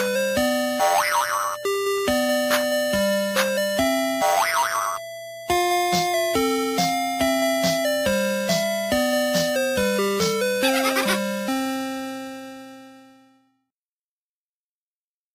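Nothing here stands out as a technical problem; the audio just runs along with no faults to point to.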